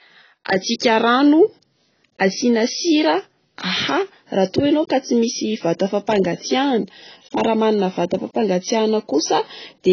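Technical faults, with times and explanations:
throughout, AAC compression: Nothing comes through above about 6.5 kHz, so the speech sounds dull and smeared, with a fizzy, warbly edge on sibilants. That's likely heavy AAC-LC coding at a very low bitrate, around 16 kbps, where the encoder drops the top end and starves the remaining bands.
0.45 s, pre-echo: A short hiss, about 11 ms long, slips in just ahead of a sharp attack, which comes out softened. The codec spreads its quantisation noise across the whole block, so noise meant for the loud onset leaks into the quiet moment before it.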